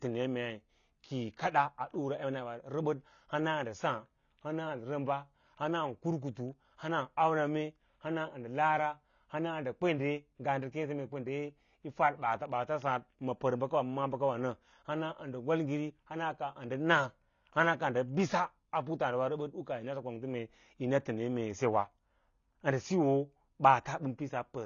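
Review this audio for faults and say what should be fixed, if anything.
The speech has likely been through AAC compression at a low bitrate, which fits something near 24 kbps. That forces the encoder to discard high frequencies and quantise what remains coarsely. Throughout the clip nothing sounds above 7 kHz, leaving the audio plainly dull and smeared. Encode at a higher bitrate, or deliver from an uncompressed master, to prevent this.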